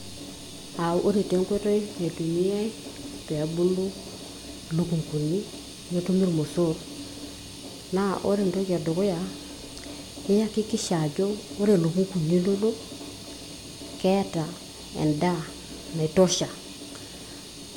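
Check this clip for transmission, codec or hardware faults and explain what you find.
Nothing here points to a transmission, codec or hardware problem; the speech comes through without any fault to report.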